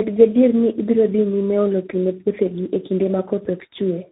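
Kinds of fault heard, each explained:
tandem speech coding: The speech passed through two speech codecs in a row, with a plain telephone stage between them. Each coder had to work on the damage left by the one before. The result sounds rough, muffled and warbly, beyond what a single codec would cause. Nothing is heard above about 3.8 kHz. The muffled, warbly quality points to a low-rate coder such as G.729A, followed later by a CVSD stage.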